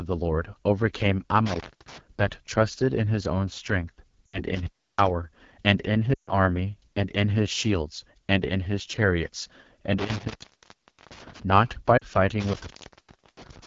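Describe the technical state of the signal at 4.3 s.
The sound drops to near silence within two frames from 4.26 to 4.43 s, then returns weakened: lost AMR speech frames, about 80 ms, with the decoder repeating its last good settings at falling gain. Underneath, a rough, raspy texture comes from the AMR wideband (HD Voice) codec, which fits the low 8.85 kbit/s rate.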